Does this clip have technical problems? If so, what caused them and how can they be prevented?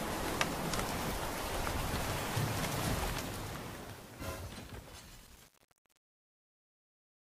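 Yes. There is truncation distortion on a fade. The fade-out starts around 3 s and runs to 7.27 s. Grit appears from 2.91 s and persists to 7.26 s. It is worst from 3.25 s onward. As the level drops, the waveform collapses into coarse square steps. The sound turns rough. This fits a volume stage working at about 8 bits without dither. To prevent it, apply fades at high resolution and add dither before reducing bit depth.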